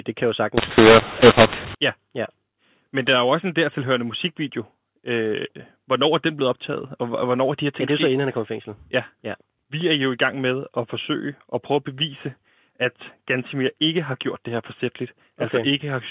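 From 0.58 to 1.75 s, just after "kan jo", the speech turns harsh and gritty: a mu-law and A-law mix-up, where telephone audio coded with mu-law is decoded as A-law. Each 8-bit code maps to the wrong level, so loud and soft samples are scrambled and near-silent ones jump well above zero. On the waveform the envelope looks jagged and pauses fill in; the spectrogram shows broadband noise smeared up to the 4 kHz ceiling of the 8 kHz G.711 channel.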